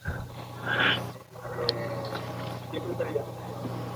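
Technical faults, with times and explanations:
1.52 s to the end: feedback echo between two devices. From here the speech returns at a steady spacing of about 0.4 s, peaking at about 17 dB below the direct sound. A second device in the same room is playing back what this microphone sent, and the microphone picks it up again. Its echo canceller removes only its own playback. Unlike room reverberation, which is a smooth decaying tail, this is a distinct copy arriving at a fixed interval.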